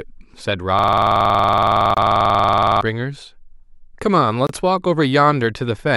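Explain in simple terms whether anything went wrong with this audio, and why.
Two things went wrong. From 0.79 s to 2.81 s there is a system hang loop: the computer stalled while the sound hardware kept replaying one 46 ms slice, about 43 times at 21.5 per second, which fits a 2048-sample buffer. It comes out as a rough buzzing stutter, and roughly two seconds of speech are lost.

There is also a gap between chunks. The audio was handled in 2.5-second pieces, and a 25 ms silence appears at each join, at 1.94 s (inside the looping stretch) and again at 4.47 s. Nothing is missing there, but the sound briefly drops out.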